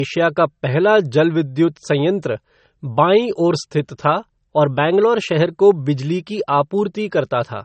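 Throughout, the speech stops sharply above 8.4 kHz with swirly low-bitrate MP3 artefacts. This is likely low-bitrate audio saved at a high bitrate: the damage predates the clean second encode.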